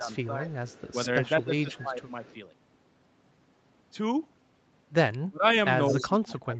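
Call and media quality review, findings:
Speech suppressed in double talk, 0.0–0.49 s, 1.4–2.24 s, 5.23–5.45 s, 5.89 s to end: echo canceller likely unable to separate near talker from loudspeaker echo, so it ducks both. Speech dips about 10, 15, 30 and 25 dB respectively.

Echo leak, 0.16–2.36 s and 5.88–6.04 s: far-end echo canceller likely leaving residual loudspeaker pickup, which returns down the line. A delayed copy of the speech trails 211 ms behind, faint (about 25 dB down) early, much stronger (about 10 dB down) near the end.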